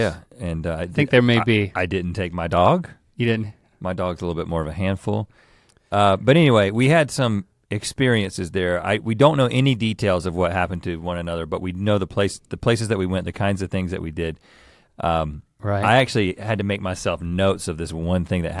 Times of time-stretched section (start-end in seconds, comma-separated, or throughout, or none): none